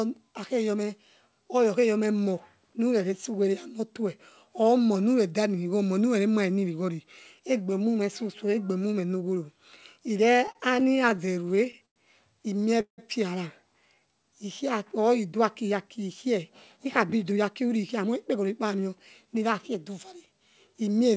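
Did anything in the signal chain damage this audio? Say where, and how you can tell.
Yes. The damage comes from the network and jitter-buffer stage of the call path. The G.722 codec stage, which fits 64 kbps, leaves its usual empty band above 8 kHz.

Repeated stalls (stutter): from 10.38 to 11.98 s there are 18 short stalls, totalling about 290 ms, the longest about 100 ms. From 12.60 to 13.00 s, four more fill half the span, the longest 173 ms. The buffer ran dry and the receiver kept extending the last sound, so nothing is lost but the audio drags. A spectrogram shows smeared, frozen stretches.

Jitter buffer slow-down: between 13.94 and 14.64 s the audio plays at about 91% speed with unchanged pitch. About 71 ms was added by repeating single pitch periods to rebuild the buffer's reserve. The waveform shows near-identical cycles repeated in a row, and sounds are drawn out.

Jitter buffer speed-up: from 16.77 to 20.75 s the audio runs at about 106% speed, still at the same pitch. 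Roughly 0.3 s was cut in small pitch-period pieces to drain excess delay. On a spectrogram, syllables and harmonic patterns look compressed in time, and the audio sounds hurried.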